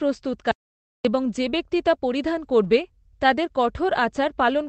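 A speech recording carried over an Opus call path limited to about 8 kHz, with an audio dropout to silence from 0.51 to 1.05 s. For about 0.54 s the sound falls to silence with no room tone, which sets it apart from a quiet pause or concealed packet loss. The likely cause is an input briefly disconnected or muted while recording continued. At 2.63 to 2.69 s, a lost packet rebuilt from error correction gives about 40 ms of rougher, noisier sound with no gap. That fits two lost packets replaced by low-bitrate copies rather than silence or smeared repetition.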